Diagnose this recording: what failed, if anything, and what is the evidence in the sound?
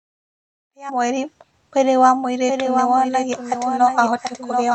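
Codec or storage stage: damaged data in a compressed stream. Between "ihinda rĩa" and "mweri mwĩrĩ wa", at 0.88 to 0.90 s, a brief glitch cuts through the speech. Corrupted bytes made the decoder misread the frames there and lose sync until it found the next frame header.

Doubled audio track, likely from a second, slower capture path or a misaligned edit leaving two copies mixed together. From 2.48 s, just after "rĩa mweri mwĩrĩ wa", a second full-band copy of the speech enters abruptly and runs to the end. It trails by roughly 0.7 s and sits about 5 dB below the original, with no reverberant tail or room colour. A spectrogram shows each harmonic pattern repeated at that fixed offset, and the waveform shows overlapping, layered envelopes.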